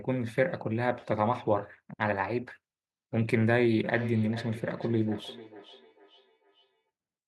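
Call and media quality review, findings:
Feedback echo between two devices, 3.84 to 6.9 s. Speech repeats roughly every 0.4 s, up to about 15 dB below direct speech. Probable cause: second device in room replaying call audio into mic. Local echo canceller misses it.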